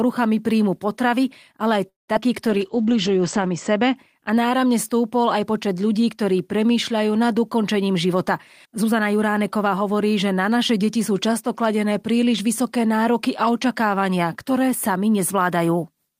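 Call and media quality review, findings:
Call audio freeze, 1.89 to 2.10 s: the sound hangs and trails off, then about 0.16 s of near-silence, roughly 0.19 s of stall in total. Likely packets held up in the network and a jitter buffer that ran dry. Playback picks up where it stopped, so nothing is lost, just a gap pushed in.

Short concealed packet loss, twice right after: 2.14 to 2.17 s and 2.21 to 2.24 s. Brief smears where the decoder stretched the last bit of sound over a hole and blended back in, with about 40 ms and 20 ms of real audio gone.

Jitter buffer slow-down, 2.27 to 2.82 s: the audio drags at about 94% speed with pitch unchanged and drawn-out sounds. The receiver repeated pitch periods to refill the buffer, adding about 37 ms.

Call bitrate drop, 2.48 to 4.02 s: the audio goes muffled and rough. The encoder fell from 32 to 11 kbps and bottomed out for about a second. Bandwidth narrowed from 20 kHz to 8 kHz, so the top end is gone until it recovers.

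Jitter buffer speed-up, two stretches: 7.50 to 8.13 s at about 110% speed, then 8.66 to 9.96 s at about 107%. Both sound hurried at the same pitch. The receiver trimmed short pitch-period pieces to work off excess buffered delay, roughly 70 ms and 100 ms cut.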